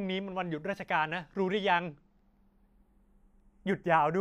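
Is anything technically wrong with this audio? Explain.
Yes. Across the whole speech clip there is a slow, sweeping flanging, a hollow swish that drifts gradually through the tone. This is channels drifting apart: the left and right sides appear to come from devices on separate clocks, mismatched by something like 40 parts per million, so the delay between them slides steadily, reaching a fraction of a millisecond by the end. When the channels are summed, the comb-filter notches move through the spectrum and produce that moving sweep.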